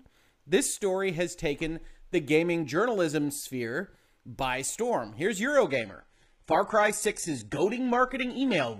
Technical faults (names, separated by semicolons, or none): adaptive stream at a lower bitrate